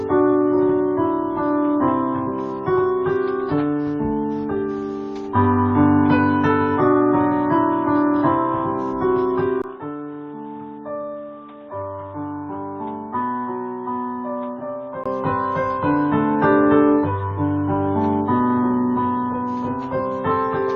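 From 9.62 to 15.06 s the input likely switched to a poorer device, with a break of about 20 ms in the sound at the switch. The replacement input passes nothing above 3.8 kHz, so the audio turns duller and narrower. It also drops by about 5 dB and carries its own background noise, sitting roughly 55 dB under the signal. After 15.06 s the full bandwidth and original level come back.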